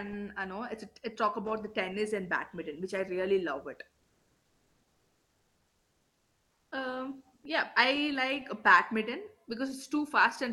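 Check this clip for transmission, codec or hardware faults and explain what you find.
One fault: comfort noise in place of the background, from 4.03 to 6.67 s, just after "I really love it". The sender likely stopped transmitting during the pause (Opus discontinuous transmission), so the receiver generated synthetic noise for those 2.64 s. The real background, about 47 dB below the loudest speech, becomes a flat, featureless hiss whose level shifts by about 2 dB until speech resumes. Throughout, the Opus call path limits the top end to about 12 kHz.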